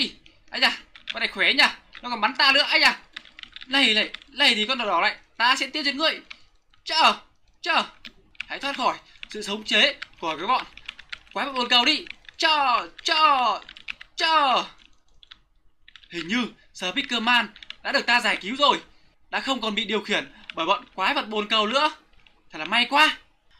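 From start to finish the sound carries clock drift between sender and receiver: the sending clock runs about one and a half percent slow, so the receiver's jitter buffer keeps draining faster than it refills. Nothing breaks outright. Instead the timing never quite settles, and the whole clip has a faintly unsteady pulse. On a spectrogram the content itself looks intact, but rhythmic features sit slightly late relative to an even grid, and the lag keeps growing.

Those repeated timing corrections run from 0.14 s to 23.47 s. To keep the buffer from running dry, the receiver duplicates short pieces of audio again and again, always stretching and never trimming. Over the stretch they add up to roughly a third of a second, which plays the material at about 99% speed. Each repeat is small, heard, if at all, as a slight hiccup or a drag in the tempo. In the waveform they show up as brief, unevenly spaced stretches where a few cycles repeat almost exactly.

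Between 8.58 s and 22.31 s come scattered short gaps, around ten of them. Each is a packet that arrived too late or not at all, lasting no more than about 15 ms, and about 70 ms in total, or roughly 1% of that span. The receiver bridged each hole by extending the preceding sound, so they pass as tiny ticks or smears rather than silences. A spectrogram shows them as thin vertical seams where the harmonic texture briefly freezes or blurs.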